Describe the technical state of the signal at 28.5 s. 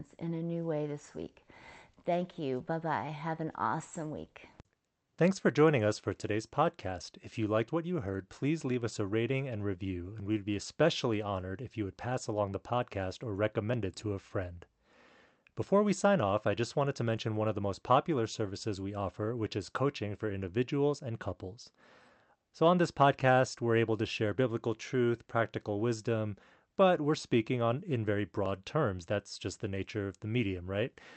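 At 28.46 s the speech jumps forward, missing a short sliver of about 10 ms with no gap of silence. That's likely a dropped buffer (overrun): the hardware overwrote samples before they were collected, splicing the two sides together.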